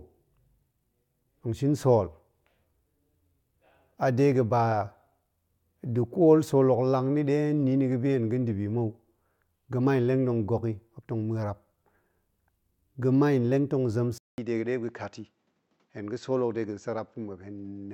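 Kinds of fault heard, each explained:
Input switched to a poorer device: after "tong zem", at 14.18 s, a 200 ms gap precedes duller speech, likely from a narrower-band input. The spectrogram then shows nothing above 7.8 kHz plus a faint new noise floor, and the waveform shrinks by about 5 dB.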